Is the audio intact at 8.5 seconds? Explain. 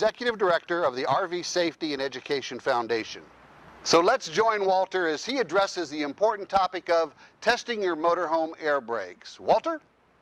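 Yes, at 8.5 seconds the audio plays through cleanly, with no dropout, click, distortion or other fault to be heard at that moment.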